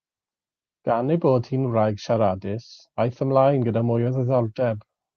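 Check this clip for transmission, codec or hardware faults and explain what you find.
Three related timing faults are present in the speech, all carried over a call path whose coding noise and top end near 12 kHz point to Opus at a modest bitrate.

Clock drift between sender and receiver runs through the whole clip. The sender's clock is about one and a half percent slower than the receiver's, so packets arrive slightly too slowly and the jitter buffer keeps drifting toward empty. The receiver has to compensate continuously. By ear this shows up as a faintly unsteady, dragging pace. On a waveform, syllable spacing stretches a little against the original, and on a spectrogram harmonics stay in place while events spread in time.

Repeated timing corrections span 0.94 s to 4.93 s. To keep the draining buffer supplied, the receiver repeatedly stretches short pieces of audio, playing at about 98% speed and adding around 70 ms in total. 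The edits all lengthen and are unevenly spaced. They come across as small hiccups or slightly drawn-out sounds. A spectrogram shows brief smeared or duplicated pitch periods at the splice points, and the waveform shows faint discontinuities in periodic stretches.

A short stall from a late packet occurs at 1.68 to 1.72 s. One packet missed its slot, the buffer ran dry, and the receiver held the last sound for 16 ms until it arrived. Nothing is lost, but playback delay grows by 16 ms. It sounds like a tiny held buzz or dip. The waveform shows a short repeated cycle, and the spectrogram shows a thin frozen vertical band with slightly lower energy.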